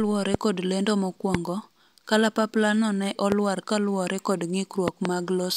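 Loud pops sit on top of this speech four times. The first, at 0.34 to 0.37 s, is a sharp single pop about 20 dB above the speech. Softer single pops follow at 1.35 to 1.37 s and 3.32 to 3.34 s. From 4.88 to 5.08 s come two in quick succession, again strong. The speech carries on underneath each one. A sudden electrical pulse, likely from a switch, plug, static or driver glitch, was added to the signal.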